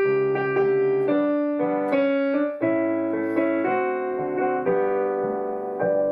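At 4.11 s there's a call bitrate drop that lasts right to the end, roughly two seconds. The bandwidth estimate collapsed and the encoder got squeezed, which fits a fall from about 128 kbps down to around 28 kbps. At that rate Opus codes everything more coarsely and trims off the top end, so the sound goes muffled and a bit rough and watery. It never climbs back before the clip finishes.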